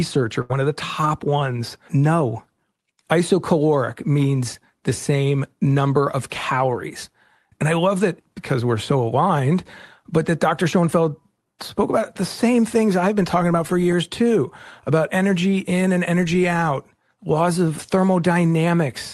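From 0.41 to 0.52 s, a burst of packet loss hits the speech just before "of the top ones": about 80 ms is concealed by stretching and fading the last sound into a buzz or hiss, then audio resumes with that stretch missing. A spectrogram shows smeared, dimming harmonics ending in a sudden onset.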